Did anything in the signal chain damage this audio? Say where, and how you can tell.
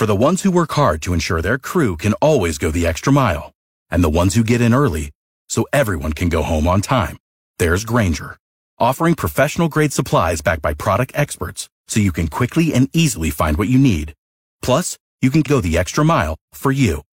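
Yes: a likely stream segment skipped at the network/playback stage; just after "you can", at 15.42 to 15.47 s, the speech jumps ahead with a brief blip.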